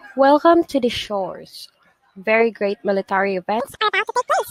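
Audio read two samples at a time (double speed) sets in at 3.60 s and lasts to the end at 4.51 s. The reader treats each pair of samples as one frame, so the speech plays twice as fast and a full octave, 12 semitones, higher.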